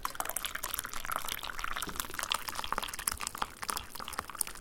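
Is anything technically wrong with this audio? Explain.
Yes, there's a section at the wrong speed right at the start, from 0.0 to about 2.15 s. That stretch runs about 1.14 times too fast, so everything in it sounds hurried and sits roughly two semitones sharp, with speed and pitch shifting together. The likely cause is that part being played back or rendered against the wrong clock, so its samples go by quicker than they were captured. Around 2.15 s it drops back to the proper pace.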